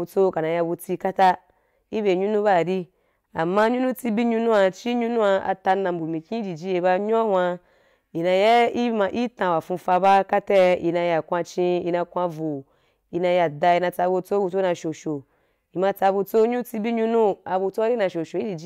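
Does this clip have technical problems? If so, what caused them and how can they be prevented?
Yes, there's hard clipping throughout: the speech runs about 5 dB too hot, so a small fraction of peaks get sliced flat and crackle. Leave more headroom when setting input gain.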